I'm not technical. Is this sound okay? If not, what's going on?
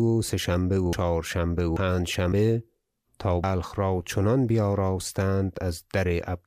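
No. At 0.93, 1.77 and 3.44 seconds the speech jumps ahead, each time skipping about a fifth of a second. This is likely a dropped buffer (overrun): the recording software fell behind, chunks of audio were overwritten, and the surrounding pieces were joined directly.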